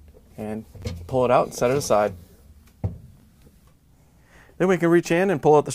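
At 0.80 to 0.83 s and again at 3.20 to 3.23 s, chunks out of order: a 10 ms chunk plays two chunks late, producing a jumbled moment, with three vertical splice lines and waveform discontinuities.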